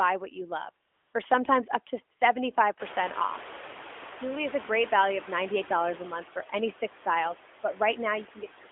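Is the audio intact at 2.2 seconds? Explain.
No. From 2.18 to 2.2 s the phone judged the talker silent and stopped sending speech frames for a single 20 ms frame, so the receiver filled the gap with AMR comfort noise. This synthetic noise was built from a coarse sketch of the background's level and spectrum, so the real background briefly gives way to a smooth, steady hiss.

Noise suppressor artifacts also affect this moment, as they do throughout. The suppressor lowers frequency bands it takes for steady noise by about 10 dB, frame by frame. The background dips between words and swells back under them.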